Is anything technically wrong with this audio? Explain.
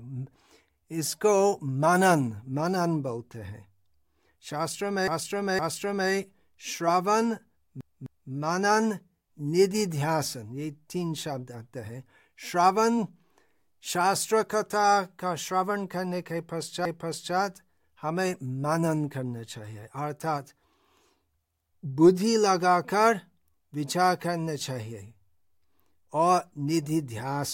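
Yes. The speech has repeated frames at 5.08 to 6.1 s, 7.81 to 8.32 s and 16.85 to 17.36 s. Blocks of compressed audio were decoded more than once: 512 ms twice extra, 256 ms twice extra, then 512 ms once extra. Each stutters audibly.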